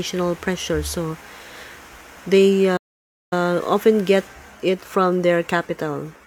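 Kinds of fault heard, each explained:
Playback stall: At 2.76 s the speech cuts off in mid-flow and the output goes completely silent for about 0.55 s, until 3.33 s, when the sound resumes. The gap is a hard drop to nothing rather than a fade or a natural pause. The likely cause is the player running short of buffered audio, or its output thread being held up, so nothing reached the device until playback recovered.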